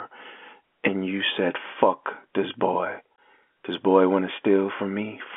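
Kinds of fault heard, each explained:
Packet loss filled with silence: a chunk of the stream never arrived, and instead of patching over it the receiver just played nothing, so the speech drops out abruptly around 3.16 s. The gap is about 20 ms, which fits a single lost packet of that length. Because silence is dropped straight in, the hole has hard edges rather than fading, and it sits within the narrow telephone-band G.711 sound.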